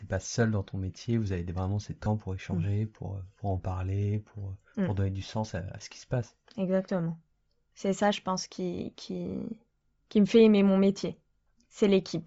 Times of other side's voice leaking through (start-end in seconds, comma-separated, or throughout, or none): none